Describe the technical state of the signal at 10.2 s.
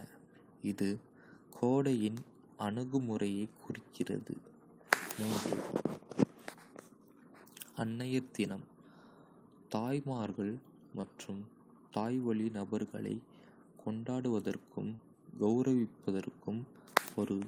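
At 10.2 s the speech falls inside a lost packet rebuilt from error correction, spanning 10.13 to 10.35 s. Several separate packets, which fits about six 20 ms packets, went missing, and the decoder filled them from low-bitrate copies carried in the following packets. There is no gap, but the passage sounds rougher and noisier.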